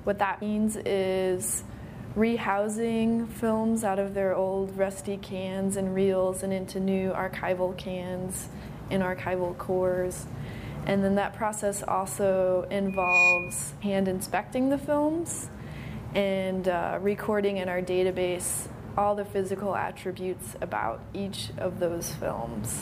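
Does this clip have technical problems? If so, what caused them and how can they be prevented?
Yes. Compressed frames skipped at 0.41 s, 10.1 s, 13.81 s and 22.33 s. At each point the audio jumps forward, losing roughly 150 ms, 50 ms, 100 ms and 30 ms of material. The sizes of the jumps fit whole frames of about 26 ms each, either missing from the file or rejected by the decoder as damaged. To prevent this, check file integrity after transfer and use error-protected storage or transport so that no frames are lost.

Loudspeaker feedback squeal from 12.88 s to 13.62 s. A single tone at 2.5 kHz swells over roughly 0.3 s until it sits about 10 dB above the rest of the sound. A microphone is picking up the loudspeaker it feeds, and at that frequency the loop gain exceeds one, so the tone keeps growing until the system limits it. To prevent this, reduce gain or move the microphone out of the loudspeaker's coverage, and notch the system around 2.5 kHz.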